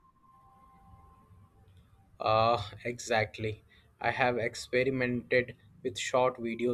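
No technical faults are audible anywhere in this recording.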